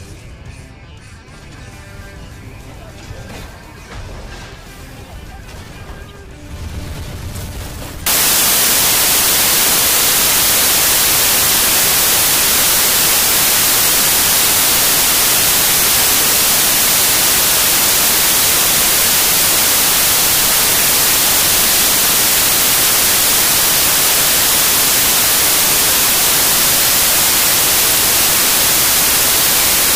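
From 8.06 s to the end, samples built from the wrong bytes turn the sound into loud, harsh broadband noise.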